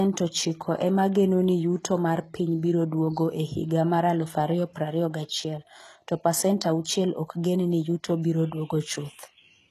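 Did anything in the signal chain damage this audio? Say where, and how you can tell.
Yes. HE-AAC compression, likely at the codec stage, damages the speech for its whole length: nothing survives above 12.3 kHz, and the treble below that is plainly coded. It points to a low bitrate around 16 kbps, where the codec rebuilds high bands from copied lower ones, so harmonics stop lining up.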